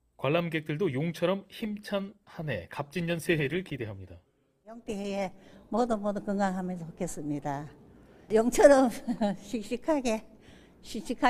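From 1.6 s to 6.17 s a call bitrate drop makes the sound rough, watery and muffled, which fits the encoder falling from about 64 kbps to roughly 19 kbps. Unlike packet loss, nothing drops out. Unlike a plain low-pass filter, coarse grainy coding accompanies the lost top end.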